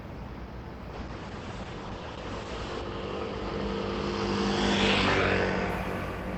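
From 0.94 s to 5.75 s a call bitrate drop degrades the audio. The call's bandwidth estimate fell and the encoder was pushed to spend far fewer bits, which fits a fall from about 32 kbps to roughly 9 kbps. Coarser coding makes the sound rough and watery, and the audio bandwidth narrows from 20 kHz to 8 kHz, so the top end goes muffled. The worst stretch lasts about 1.89 s before quality climbs back.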